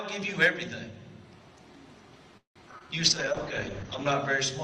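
Three kinds of network-related fault affect the last half of this audio. From 2.37 to 2.58 s there is a call audio freeze, likely from packets held up in transit until the jitter buffer ran empty: the last sound is stretched out, then fades to silence for about 130 ms before the audio resumes where it stopped, so about 180 ms of gap is inserted and nothing is lost. Two instances of short concealed packet loss follow. At 2.72 to 2.74 s about 40 ms of audio is missing; the stream also catches up by roughly that amount, so the material is skipped with only a couple of milliseconds of fill. At 2.79 to 2.82 s about 20 ms is missing, and the receiver covers most of it by extending the preceding sound, which is heard as a short smear before it blends back into the real signal. From 3.05 to 4.21 s a call bitrate drop makes the audio coarser and muffled. The top of the spectrum is cut from 20 kHz to 8 kHz, consistent with the encoder being pushed from about 32 down to 8 kbps. 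It stays at its worst for about 1.1 s, and the sound clears again before the end.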